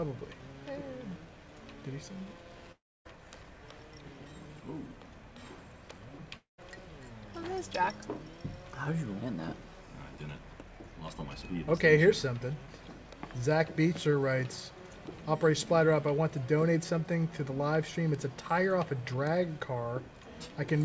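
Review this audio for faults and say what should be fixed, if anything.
Long network dropout at 2.72 to 3.07 s and again at 6.37 to 6.60 s. In each gap the last sound is stretched into a fading buzz, about 0.33 s and 0.21 s long, and then goes quiet for about 0.26 s and 0.13 s before the audio resumes. About 0.34 s and 0.22 s of material never returns. The likely cause is packets lost in transit that the receiver concealed and then muted. The band stops at 8 kHz, which fits G.722 call audio.

To prevent it, stabilise the network link and enable forward error correction or redundancy so that lost packets can be recovered.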